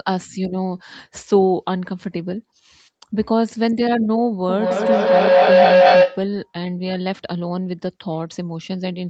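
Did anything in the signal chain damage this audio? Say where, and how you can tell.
Yes. Two devices on the same call formed an acoustic loop, and the path from loudspeaker back into the microphone gained level each pass. From 4.49 to 6.35 s the repeats grow into a feedback howl near 500 Hz, with repeats roughly every 200 ms and peaking about 8 dB above the speech.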